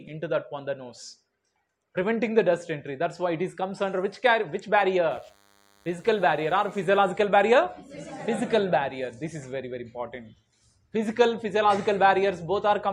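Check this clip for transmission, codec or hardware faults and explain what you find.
One hardware fault is present. From 5.11 to 7.11 s, DECT cordless phone buzz: 10 ms radio bursts from a nearby handset or base station are rectified by the audio circuitry, producing a thin 100 Hz buzz rich in harmonics, faint and roughly 35 dB below the sound.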